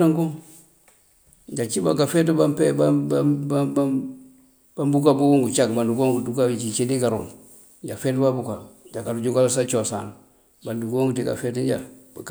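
No technical faults detected.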